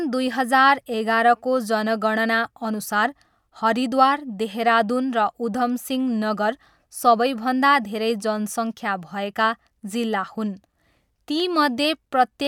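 No technical faults can be heard in this recording.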